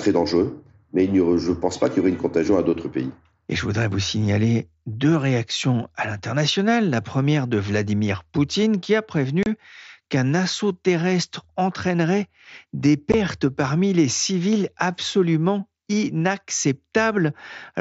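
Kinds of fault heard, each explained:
Unconcealed Bluetooth headset packet loss: missing headset packets went unfilled, cutting abrupt holes at 9.43 s (30 ms) and 13.12 s (15 ms).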